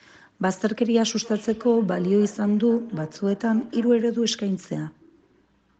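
From 1.24 to 4.08 s there is feedback echo between two devices: a second device replays the speech and the first device's microphone picks it up again. Repeats come roughly every third of a second, about 19 dB below the speech, each thinner and more ringing.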